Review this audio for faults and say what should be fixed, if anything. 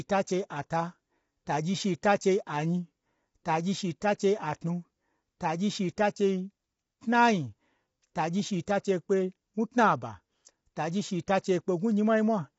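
Throughout, the speech sounds rough and grainy, with noise between harmonics and nothing above 7.7 kHz, likely low-delay AAC compression at a bitrate around 24 kbps. Unlike a simple low-pass, the harmonics themselves are smeared by its short frames. Raise the AAC-ELD bitrate or use a full-delay codec where latency permits.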